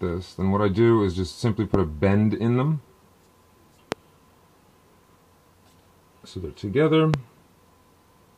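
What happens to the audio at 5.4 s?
Nothing goes wrong at 5.4 s; the audio plays through that moment intact, with no dropout, click or distortion.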